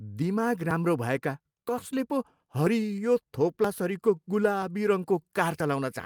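The recording was likely processed in one-second chunks, losing a sliver of audio at each handover: audio missing between chunks. At 0.71 s, just before "भएका कसले", and again at 1.69 s, 2.67 s, 3.64 s and 5.60 s, roughly 20 ms of speech drops out and the two sides butt straight together with no silence. Each join is heard as a tiny skip in the speech, a brief stumble that recurs at a steady rhythm of about one per second.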